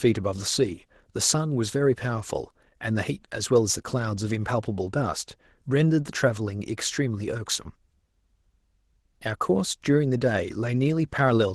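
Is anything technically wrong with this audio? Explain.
Yes. Throughout the speech, Opus voice compression runs in hybrid mode: a SILK predictive coder handles the band below 8 kHz and a CELT layer covers the top. The excitation is coded coarsely, which fits a bitrate near 16 kbps, so the voice sounds plainly hoarse and slightly robotic.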